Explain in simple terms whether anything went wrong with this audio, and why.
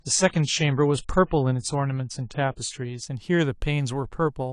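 For the first 3 seconds the speech sounds dull and smeared, as if heard through a thin wall, with nothing above 9.8 kHz. At 3.03 s it suddenly becomes clearer and crisper, with no pause or dropout. This is an adaptive stream starting at a low bitrate: the player began with a lightweight version so playback could start quickly, then switched to a better version once it had checked how fast the connection was.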